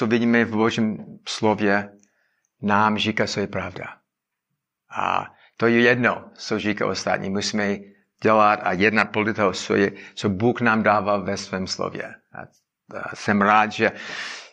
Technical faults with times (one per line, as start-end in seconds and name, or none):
none